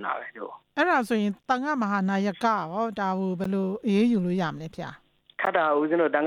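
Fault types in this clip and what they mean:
Gap between chunks: the audio arrives in 2.0-second pieces, and a silence of about 13 ms opens at each join, at 1.43, 3.44 and 5.45 s. Each hole is brief, and the holes recur at a strict 2-second spacing. Unlike a dropout, where a stretch of sound is lost and the material jumps ahead, nothing is missing here: the sound halts and resumes exactly where it stopped, only slightly delayed.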